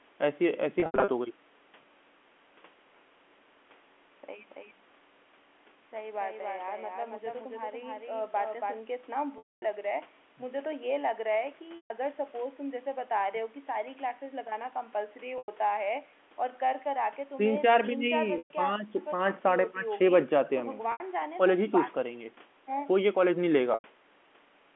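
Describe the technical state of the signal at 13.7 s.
At 13.7 s the speech is intact, carried in the normal narrow band of G.711 telephone coding with nothing wrong to be heard at that moment.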